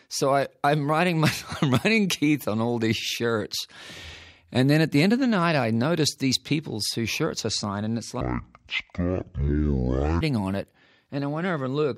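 From 8.21 to 10.21 s the sound drops to half speed and an octave low, the mark of stereo read as mono: interleaved left and right samples run as one channel. A faint mirrored copy in the upper spectrum distinguishes it from a plain slowdown.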